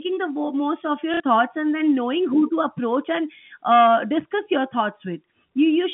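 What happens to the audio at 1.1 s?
From 1.14 to 1.2 s there is packet loss with the last packet repeated. About 60 ms of audio went missing, likely a couple of packets. The receiver replayed the last good one until new data arrived, so the sound stutters robotically.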